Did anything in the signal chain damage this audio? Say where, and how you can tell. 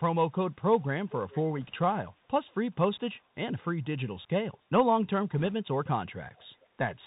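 Yes, at three points in the chain.

At the codec stage, Bluetooth CVSD headset coding runs through the whole clip, consistent with a 64 kbit/s link. A spectrogram shows a hard ceiling at 4 kHz, with granular hiss underneath. Loud high sounds outrun the adaptive step and distort, and s sounds turn scratchy.

In call processing, an echo leak appears at 1.09–1.43 s, roughly 20 dB below the speech, and again at 6.36–6.45 s, much fainter, around 35 dB down. Both are delayed copies about 0.42 s late, seen as ghost harmonic patterns shifted right. The likely cause is a far-end speakerphone whose echo canceller let its own playback through.

On the radio link, bit errors on a Bluetooth voice link add a brief rushing crackle at 1.61–1.72 s (around 1% errors) and 5.40–5.53 s (around 1.5%). Each flipped bit shifts the signal only slightly, so the waveform shows no spikes. The spectrogram shows broadband noise smeared over the speech.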